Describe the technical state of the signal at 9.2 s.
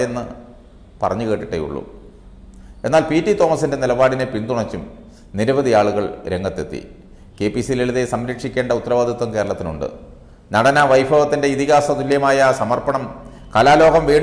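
At 9.2 s the signal is intact, with no audible fault at that moment.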